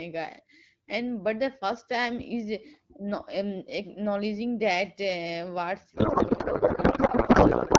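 From 5.94 s to the end, the speech gives way to garbled noise and warbling that barely tracks it. This is a codec payload misread in the AMR wideband stream, which runs clean at 12.65 kbit/s up to that point. The decoder is unpacking the bits with the wrong layout, which fits octet-aligned frames being read as bandwidth-efficient, so every field lands in the wrong place and decodes as nonsense.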